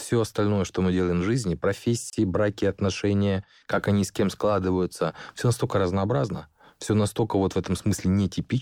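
A gap at a join of encoded pieces falls at 2.10 to 2.13 s, between "мы делаем в жизни" and "браки отношения как они". The audio was encoded in separate pieces and spliced untrimmed, so one run's padded final frame and the next run's start-up delay both remain as a silence of about 30 ms. The codec softens its edges, so the speech drops out briefly and then resumes exactly where it stopped.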